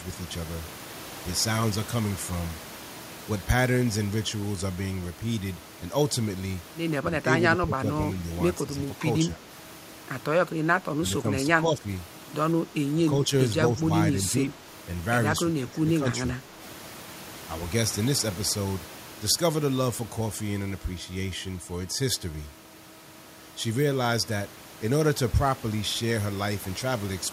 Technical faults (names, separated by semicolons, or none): speech suppressed in double talk